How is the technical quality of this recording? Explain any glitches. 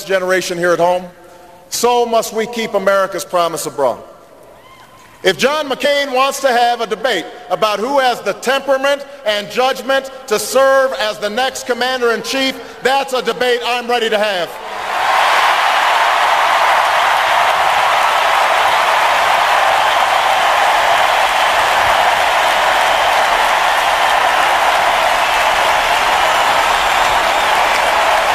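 The recording has two skips where compressed frames were skipped, at 5.84 s and 17.57 s. Whole frames of about 26.1 ms were never decoded, so the sound jumps ahead, by roughly two frames (about 50 ms) and then roughly five (about 150 ms). Because adjacent frames overlap, each join is a brief smeared blip rather than the hard click of a sample-level splice, and unlike a dropout there is no gap of silence.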